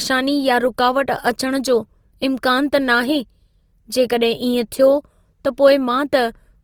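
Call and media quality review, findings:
Opus compression, throughout. Speech grainy, rough, noisy in texture; little swirl. Bandwidth stays full, content up to about 20 kHz. Likely Opus encoder in CELT mode at about 24 kbps. Too few bits, so bands filled with noise or folded copies.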